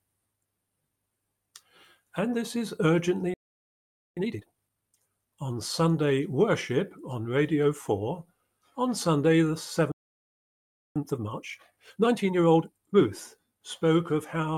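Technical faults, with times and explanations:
3.34–4.17 s, playback stall: the sound cuts out mid-flow and goes silent for about 0.83 s. That gap is most likely the player running dry of buffered data, or its audio thread getting blocked, so nothing reaches the output until it recovers.
4.17–4.99 s, time-compressed catch-up: right after the gap the audio comes back hurried, running at 2x but at normal pitch. The player is working off its backlog by snipping out tiny pieces and cross-fading over the joins.
9.92–10.96 s, playback stall: another dropout, this one longer at about 1.04 s of silence in the middle of the sound. The player likely starved or stalled again, and the output holds silent until data flows back in.
10.96–13.02 s, time-compressed catch-up: a longer recovery this time, at a gentler 1.5x. Pitch stays put because small chunks are being dropped and blended together rather than the audio being sped up like tape. 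That chopping is what gives it the rushed character until the player catches up.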